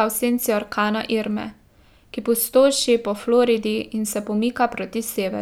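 Listening to the speech recording, nothing technical stood out at any point.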